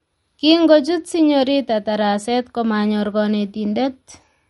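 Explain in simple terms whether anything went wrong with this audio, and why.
The whole recording sounds dull and plainly watery. Nothing is heard above about 11.2 kHz. That is likely caused by heavy MP3 compression.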